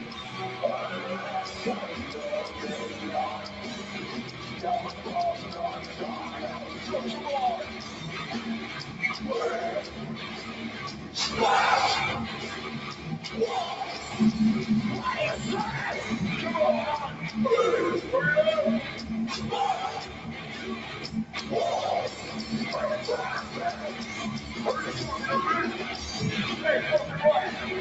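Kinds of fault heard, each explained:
Sound cut by the noise suppressor: brief dips in level, about 4 dB at their deepest, where the sound sinks for a fraction of a second before recovering, at 2.86 to 3.03 s, 3.38 to 3.64 s, 3.80 to 3.95 s and 10.94 to 11.15 s. The call's noise suppressor mistook these stretches of audio for background noise and turned them down harder than the surrounding material, which pulls their level below that of their neighbours.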